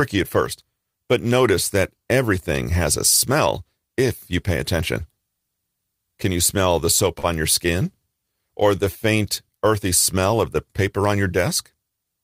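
Just after "you smell the soap", from 7.19 to 7.26 s, the sound hangs for a moment with a faint buzz or dip before "on your" follows. This is a short stall from a late packet: the jitter buffer ran dry, the receiver held the last sound for about 42 ms, then resumed with nothing lost but everything slightly later.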